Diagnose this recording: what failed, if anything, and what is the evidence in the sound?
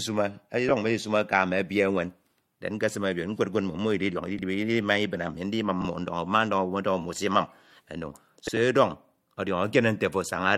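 Network delivery failed, with frames out of order. At 0.69 s, 4.37 to 4.42 s, 5.80 to 5.85 s and 8.46 to 8.57 s, short stretches of speech play with their halves swapped. The swapped blocks last 8 ms, 38.7 ms, 36 ms and 85.3 ms. Each event gives a garbled flutter. Two adjacent runs of frames arrived in reverse order, probably three or four frames each, and were decoded as received. No time is lost.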